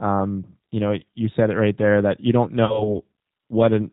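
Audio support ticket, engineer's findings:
G.729 codec, whole clip: speech band-limited at 4 kHz, rough, slightly synthetic texture; codec damage plainly audible. Pulse-based excitation and vocal tract filter rebuild, which fits 8 kbit/s G.729A. Unlike a simple low-pass, the roughness sits inside the band, not just missing top end.

VoIP packet loss concealed by the speech codec: 0.99–1.03 s, between "um you know" and "you said it right", brief stretched, fading sound, fits a single 20 ms packet; 2.65–2.95 s, after "there that you don't", longer stretched, fading sound, fits about 40 ms lost. Decoder extrapolates last pitch and filter at falling gain, and the weakness lingers after packets resume. Dropout would give silence or a click instead.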